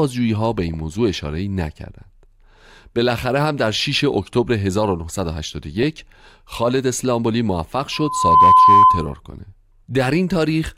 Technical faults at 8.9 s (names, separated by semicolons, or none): loudspeaker feedback squeal; DAB burbling